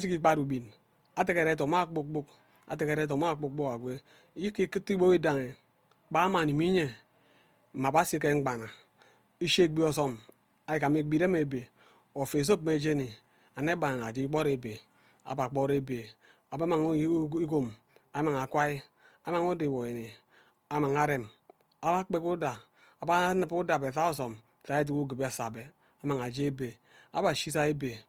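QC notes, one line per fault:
Throughout, Opus compression: the speech sounds plainly grainy and rough, with noisy rather than hollow upper bands, though content still reaches 20.3 kHz. This is likely Opus in music mode filling bit-starved bands with folded copies or noise, which fits a bitrate near 24 kbps.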